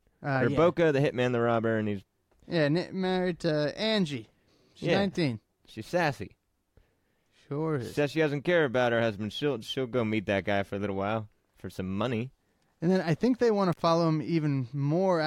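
At 13.72 to 13.80 s the speech drops out briefly with an intermittent contact fault. A loose plug or cable connection opened the signal path for about 60 ms, so the audio cuts away abruptly, crackles as contact breaks and returns, and faint hiss remains.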